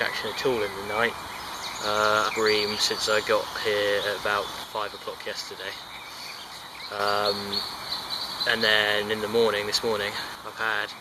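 A short glitch cuts through the audio from 2.28 to 2.30 s. This is damaged data in a compressed stream: corrupted bytes made the decoder misread those frames, lose sync and skip ahead to the next valid frame header.

From 4.64 to 6.99 s, and again from 10.35 s to the end, the sound abruptly drops about 6 dB. The likely cause is one channel dropping out: with one stereo side lost, the mono sum carries only half the shared content, and anything unique to that side vanishes.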